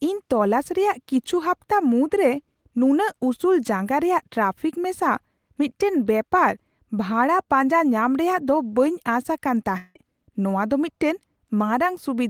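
A long network dropout runs from 9.77 to 9.97 s, about 0.2 s in this speech. The sound does not cut to silence. The final fragment before the gap stretches into a buzzing, hissy tail that fades for roughly 180 ms. The speech then resumes a little further along, skipping about 180 ms of material. This pattern most likely means a run of audio never reached the receiver, which concealed the hole by repeating and decaying what it last had.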